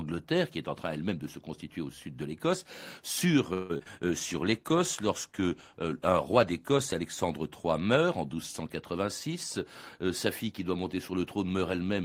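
At 3.53 s the sound stalls for about 0.16 s: the last bit of audio gets stretched out as a smeared, buzzy continuation, and then things pick up exactly where they left off with nothing skipped. That's a call audio freeze, likely from packets getting held up in transit until the jitter buffer ran dry. The receiver papered over the wait by extending what it last had, so the whole clip just ends up that much later.

Right after, there are two short concealed packet losses, at 3.78 to 3.81 s and 3.83 to 3.87 s. Each time about 20 ms of audio never made it to the decoder, and the receiver bridged the hole by carrying the previous sound forward before blending back in. You hear them as quick little smears or wobbles bunched up just after the freeze.

From 4.07 to 7.37 s there's a call bitrate drop. The encoder was pushed down from 32 kbps to 15 kbps, presumably because the bandwidth estimate fell, and it sat at that floor for around 2.2 s. 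Coding that coarsely makes the sound rough and a bit watery, and the top end gets duller, until the rate climbs back up near 7.4 s.

Finally, from 8.97 to 9.59 s, a jitter buffer speed-up kicks in. The buffer was holding more audio than it wanted, so the receiver trimmed out tiny pitch-period slices over and over, a few hundredths of a second in total. Playback runs at about 105 % with the pitch unchanged, so that stretch comes across as slightly rushed.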